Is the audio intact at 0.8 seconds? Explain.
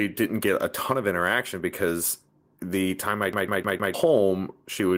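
Yes, the speech at 0.8 s plays through intact, with no dropout, click, distortion or other fault audible at that moment.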